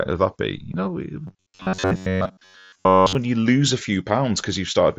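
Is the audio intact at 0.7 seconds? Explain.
No. At about 0.72 s there is concealed Bluetooth headset packet loss. Roughly 15 ms of audio never arrived from the headset, which fits a couple of lost packets. The receiver filled the gap by copying the best-matching stretch of the waveform just before it. That keeps the level steady, so there is no silence. The patch is very short, but two packets in a row make a run: a buzzy repeat held at full level, then a slight warble as real audio returns through the mSBC link.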